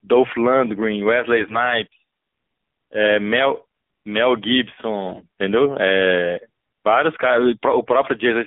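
Speech carried through the AMR narrowband mobile codec, with the whole clip confined to a band of roughly 150 Hz to 3.6 kHz. Nothing above 4 kHz survives, so sibilants are dull and muffled, and the voice has the buzzy, synthetic grain of a model-based coder starved of bits, which fits a low mode around 7.4 kbps. What sets this apart from a simple low-pass filter or a telephone-band EQ is that the damage is in the texture itself: pulses driving a vocal-tract model leave audible buzz and roughness, not just a loss of treble. Throughout, the level also breathes, likely from gain pumping, where the input is set too hot and a fast limiter clamps down on each loud syllable. The gain swings by about 5 dB under each louder stretch, so loud and quiet parts sit close together and the sound is squashed. Unlike plain background noise or a slow automatic gain control, the swell and duck track each phrase closely. 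From 5.06 to 5.24 s come AMR bit errors, a burst that fits about eight corrupted 20 ms frames at a high error rate. The voice keeps roughly its pitch and loudness but turns hoarse, scratchy and gargly. That is what separates it from packet loss, which would leave gaps, muting or smeared repetition rather than distorted but continuing speech.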